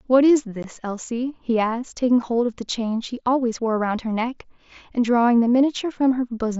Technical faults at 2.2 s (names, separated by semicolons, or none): unconcealed Bluetooth headset packet loss